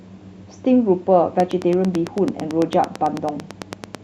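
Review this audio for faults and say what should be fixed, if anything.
A regular ticking cuts through the speech from 1.40 to 3.96 s: a train of clicks at about 9 per second, some twenty near-identical pulses standing roughly 10 dB above the speech, audible in the pauses too. The likely cause is electrical interference from nearby equipment or a faulty connection or power supply injecting pulses. To prevent it, move or switch off nearby devices, use shielded cables, and check the interface's connection and drivers before recording.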